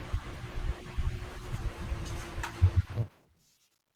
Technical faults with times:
0.33-0.36 corrupt frame decoded
1.55-3.95 drift correction step
2.43-2.50 corrupt frame decoded

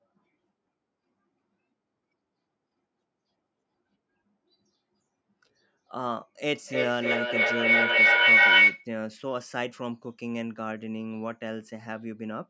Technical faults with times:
6.55-8.90 feedback howl

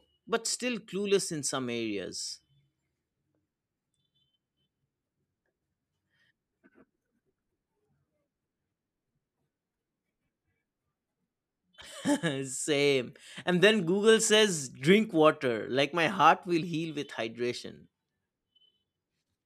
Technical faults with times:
none

